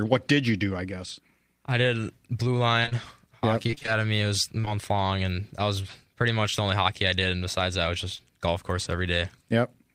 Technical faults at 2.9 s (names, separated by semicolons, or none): short concealed packet loss